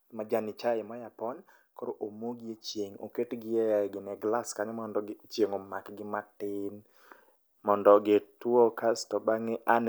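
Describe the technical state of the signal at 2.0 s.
At 2.0 s the speech signal is intact, with no audible technical fault.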